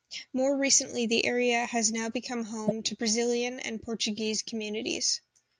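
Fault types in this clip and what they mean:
Corrupt frame decoded: flipped bits in the compressed stream went undetected, so the decoder rebuilt the damaged data with wrong gains and misread codes, putting energy at the wrong frequencies. Right after "area has now become", from 2.67 to 2.72 s, an error peaking near -15 dBFS spans roughly two frames.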